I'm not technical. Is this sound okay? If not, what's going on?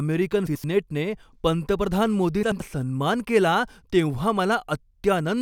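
No. At 0.47 to 0.64 s, and again at 2.43 to 2.60 s just before "सन्मान केला तेव्हा", the speech briefly turns into a garbled flutter. This is frames out of order: two neighbouring chunks of about 85 ms each played in swapped order. Nothing is missing.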